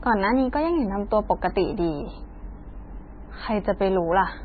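Speech throughout carries heavy MP3 compression artefacts, likely from encoding at a very low rate, around 17 kbps. The encoder has dropped everything above 4.6 kHz, so sibilants lose their hiss and sound dull, while weak spectral detail flickers in and out between frames, giving a watery, swirling texture. On a spectrogram this shows as a flat ceiling at 4.6 kHz with patchy, blocky holes below it. The waveform's attacks look smeared.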